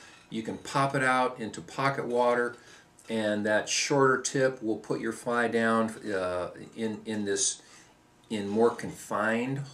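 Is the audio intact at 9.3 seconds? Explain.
Yes, the audio is intact at 9.3 seconds, with no dropout, glitch or other fault heard at that point.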